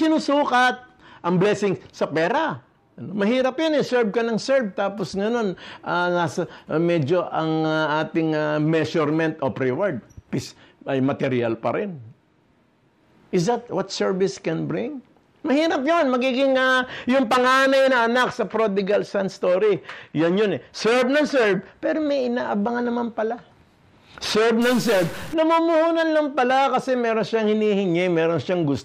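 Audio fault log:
24.62–25.34 s, stuck bit: for about 0.7 s the sound turns harsh and buzzy, with a gritty edge riding on the waveform and a hiss-like fizz filling any quieter moments. This most likely comes from one data bit held at a fixed value, so roughly half the samples are pushed off by a step of around -30 dBFS, following the waveform's shape and flipping with the sign of small values.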